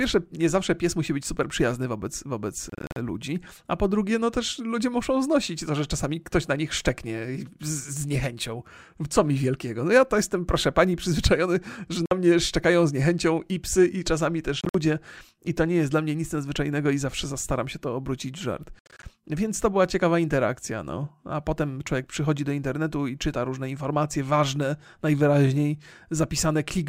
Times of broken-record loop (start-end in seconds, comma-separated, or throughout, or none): none